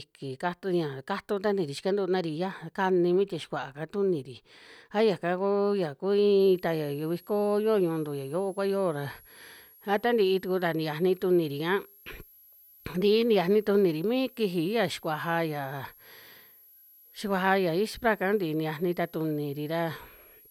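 From 6.40 s to the end, a switching supply whistle creeps in, a faint high tone wandering between 11.2 and 11.8 kHz, about 30 dB under the speech.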